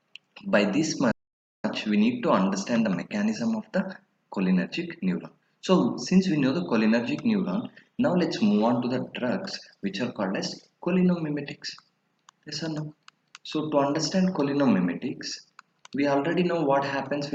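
Playback stall at 1.11–1.64 s: the audio drops to silence for about 525 ms, then resumes, likely because the player ran short of data or its thread was blocked.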